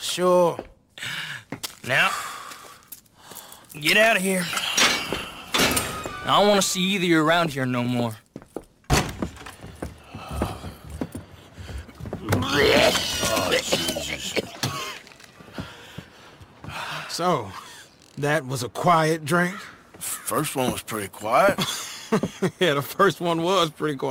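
From start to end the audio carries a crude rate conversion fault: samples were repeated by a nearest-sample method rather than filtered, and the error pattern fits a 44.1 kHz to 48 kHz change. The result is a gritty, inharmonic fizz sitting roughly 20 dB below the signal, rising with loud and bright passages. Unlike steady hiss or dither noise, it vanishes in quiet moments and its tones bear no harmonic relation to the sound.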